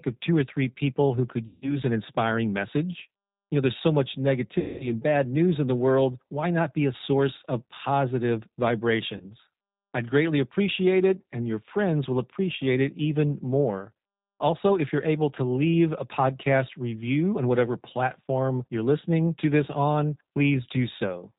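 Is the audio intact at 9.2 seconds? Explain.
No. From 9.17 to 9.26 s the speech breaks into a brief buzzy, smeared tone that fades, and the voice sounds thin and slightly wrong for a moment after normal sound resumes. This is VoIP packet loss concealed by the speech codec. About 30 ms of audio never arrived, which fits a single lost packet. The decoder filled the gap by repeating its last pitch and filter settings at falling gain. Each frame builds on the one before, so the error carries past the gap.

Underneath, the whole clip, including this moment, has the plainly audible roughness of the G.729 codec. The voice is muffled, with nothing above 4 kHz, and slightly synthetic and grainy. At 8 kbit/s the codec rebuilds speech from a vocal tract filter, a pitch predictor and a few pulses in each 10 ms frame rather than sending the waveform itself, so fine detail is lost.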